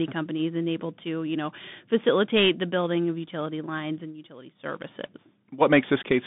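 A speech clip passed through the Bluetooth CVSD headset codec, a narrowband headset link that sends one bit per sample to say whether the signal rises or falls, adapting its step size as it goes. The line band runs only from about 150 Hz to 3.6 kHz throughout, thinning the voice, while the coarse delta coding leaves plainly audible damage: a granular hiss beneath the speech, scratchy sibilants, and distortion where loud high-frequency sounds outrun the step size.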